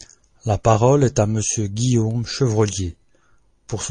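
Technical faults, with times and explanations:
Throughout, MP3 compression: the speech carries plainly audible codec damage, with a watery, swirly quality that comes from the encoder running short of bits. It drops weak frequency lines, which then flicker in and out from frame to frame. The amount of damage fits a low bitrate of around 40 kbps, and MP3 encoding is the likely cause.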